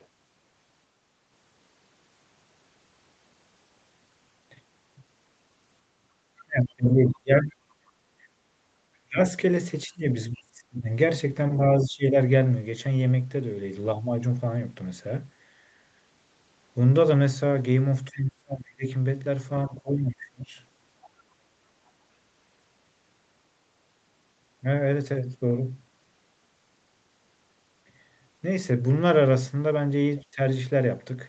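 Other side's voice leaking through, at 0.00 to 0.06 s, 6.37 to 6.44 s and 7.41 to 7.54 s: faint scraps of a second voice sit under the talker, very low at the start and rising to roughly 20 dB below the speech by 7.4 s. This is likely loudspeaker echo the canceller failed to remove from the microphone.

Speech suppressed in double talk, at 6.45 to 7.89 s, 9.03 to 12.17 s, 18.13 to 20.54 s and 30.32 to 30.39 s: the talker's voice dips by as much as about 30 dB. The final brief dip is only about 10 dB. The canceller, likely unable to separate near speech from echo, pulled both down.

Background gated by the echo canceller, at 8.17 to 8.21 s: the room sound drops by about 11 dB for a moment and then returns. The canceller clamped the microphone hard while the loudspeaker played, then released it. Throughout the clip, nothing reaches above 8 kHz, which fits the call path's Opus bandwidth.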